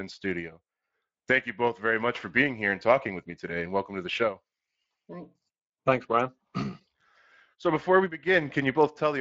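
Speex codec damage runs through the whole clip, plainly audible. This CELP speech codec models the sound with a limited excitation budget, leaving speech noisy and somewhat hoarse. The character fits a Speex setting of around 20 kbps.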